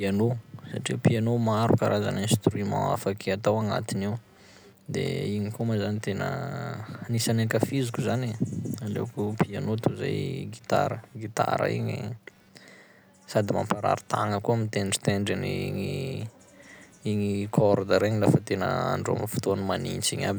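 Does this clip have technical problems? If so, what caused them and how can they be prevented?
Yes. There is computer activity noise throughout. Shifting loads from the processor, graphics card or mouse pulled the ground shared with the audio circuit up and down, and that fluctuation got into the signal. It comes through as a buzzing, scratchy chirp pulsing at around 200 Hz, about 35 dB below the speech. It rises and falls with what the computer is doing rather than with the speech. It can be prevented by using an external audio interface with a ground-isolated or balanced connection, kept away from the computer's internal ground.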